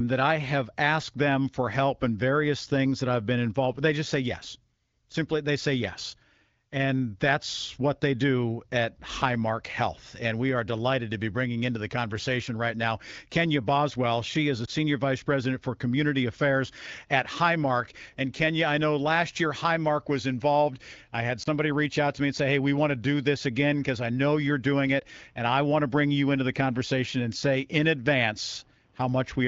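Lost AMR speech frames occur at 14.65 s after "is a", 21.43 s after "was involved I had", and 24.99 s after "I know you're doing". Each time one 20 ms frame was corrupted, and the decoder repeated the previous pitch and vocal tract settings at lower gain, giving a brief dip or warble.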